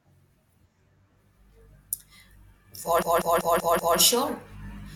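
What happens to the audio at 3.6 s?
Repeated frames: a run of compressed frames was written over and over between 3.02 and 3.98 s, so the decoder plays one 192 ms block five extra times. At 3.6 s the speech stutters through the same fragment, stretching the clip by 960 ms.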